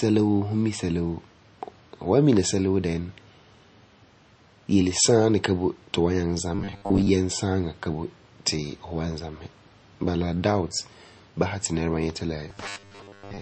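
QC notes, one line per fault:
Throughout: MP3 compression, plainly audible watery smearing and nothing above 8.3 kHz, likely from a low-bitrate encode that fits about 32 kbps.
6.55–7.09 s and 12.48–13.41 s: robotic sound from repeated short buffers, a rigid 100 Hz buzz, likely from 10 ms chunks replayed while most new audio is skipped.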